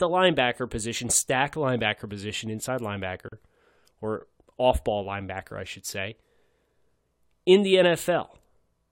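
Right after "stack linebacker position inside", at 3.28 s, there's a gap at a join of encoded pieces: a 38 ms hole where padding from separately encoded chunks wasn't trimmed.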